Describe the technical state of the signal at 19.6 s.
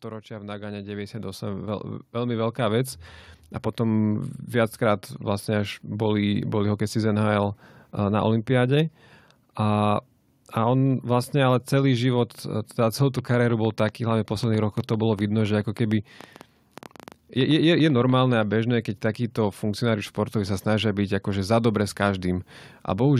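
At 19.6 s the speech signal is intact, with no dropout, clipping, glitch or other fault at that moment.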